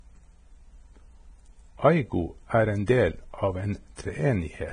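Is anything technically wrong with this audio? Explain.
Yes, there are two faults.

Throughout the clip the speech sounds hissy and grainy, with roughened tones and blurred consonant onsets, and nothing is present above 9.7 kHz. The likely cause is heavy Vorbis compression at a low quality setting, consistent with a bitrate in the low twenties of kbps. The encoder lowered its cut-off and quantised the remaining treble so coarsely that fine detail became noise. On a spectrogram, energy stops at a flat ceiling near 9.7 kHz, with speckled patches in the upper bands.

At 2.86 s, just after "er en", there is a pre-echo. A short hiss of about 18 ms runs ahead of a sharp attack, which sounds softened. A transform codec spreads quantisation noise across a whole block, so noise sized for the loud onset also fills the quiet moment before it. On the waveform, a low, fuzzy smear sits just before the transient. 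On a spectrogram, broadband noise appears slightly before the attack's vertical edge.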